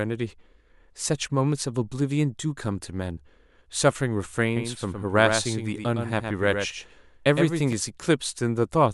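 From 4.57 s to 7.73 s there's a doubled audio track: a second full-band copy of the speech trails about a tenth of a second behind, only a few dB quieter, with no room tail, cutting in and out abruptly. Likely a second capture via a slower path.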